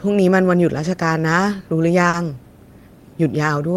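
At 2.09 to 2.15 s there is a short concealed packet loss. About 40 ms of the speech arrived too late to decode. The receiver patched the gap by extending the preceding sound, then faded back into real audio. It comes across as a brief smear.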